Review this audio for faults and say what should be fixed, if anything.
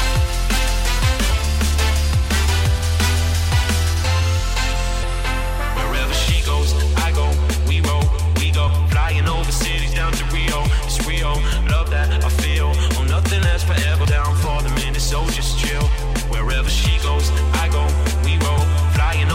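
Damaged data in the compressed stream causes four short blips: 1.30 to 1.32 s, 5.02 s, 14.05 s, and 18.58 to 18.60 s. At each point, corrupted bytes break a frame. The decoder misreads it, loses sync and hunts for the next valid header. Check transfers and storage with checksums, and use error-resilient framing so bad frames are caught before decoding.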